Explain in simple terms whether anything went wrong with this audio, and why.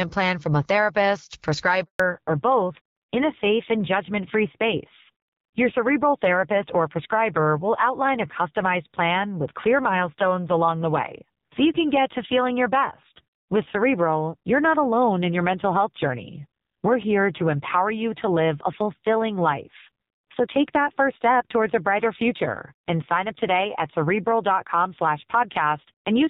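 Two things went wrong, both at the same moment. Right after "plan from a therapist", at about 1.84 s, the sound cuts out completely until about 2.00 s. That is a handover gap. The phone was switching the call from one network to another. For those 160 milliseconds, no speech reached the listener. The voice drops away almost at once, and anything said in that short window is simply gone.

When the sound returns at about 2.00 s, it has changed. This is a fallback to narrowband. Before the switch, the call used HD Voice, the AMR wideband codec, and the voice sounded fairly full and clear. After the switch, the call runs on the older AMR narrowband codec. Nothing above 4 kHz gets through from here to the end of the clip. The voice sounds duller and muffled, and it has a rougher, more raspy edge.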